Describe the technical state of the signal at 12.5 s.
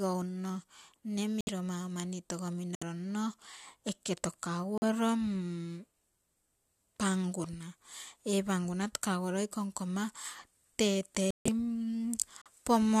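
A corrupt frame muted fault runs from 12.42 to 12.48 s, ending just before 12.5 s. Damaged compressed data was rejected by the decoder and replaced with silence, leaving an abrupt 60 ms hole, which fits two lost frames, with timing preserved.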